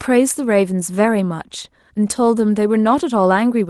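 The speech comes through a call-codec path whose top end stops at about 12 kHz, which fits Opus at a moderate bitrate around 24 kbps, and the signal shows nothing beyond what that path normally delivers.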